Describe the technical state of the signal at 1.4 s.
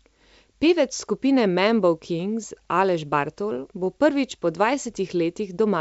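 At 1.4 s the speech is intact, carried by G.722 wideband telephone coding at 64 kbit/s with no fault present at that moment.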